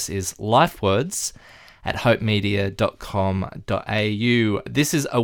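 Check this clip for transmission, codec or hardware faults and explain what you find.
One fault is present: dropped samples at 3.99 s. It is a single sharp click. A handful of samples, a fraction of a millisecond, are likely missing. The waveform jumps straight to a later value. That step makes a thin broadband tick, and nothing audible is lost.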